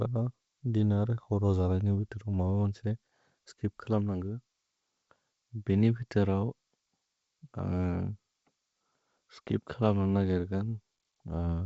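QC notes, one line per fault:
No fault to note; the speech comes through G.722 wideband telephone coding at 64 kbit/s with at most faint coding damage.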